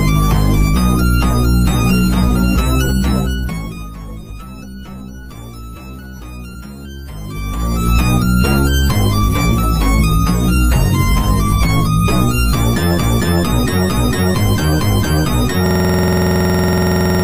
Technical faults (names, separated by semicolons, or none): zipper noise; compressed frames skipped; system hang loop